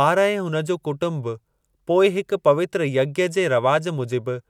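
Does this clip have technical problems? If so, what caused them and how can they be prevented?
No, no technical faults heard.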